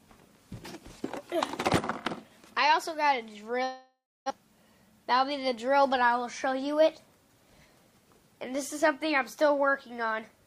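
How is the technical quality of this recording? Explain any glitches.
One clear glitch affects the quality. From 3.63 to 4.32 s, a likely long network dropout halted delivery: a fading buzz, a quarter-second of silence, then resumption with about 0.6 s missing.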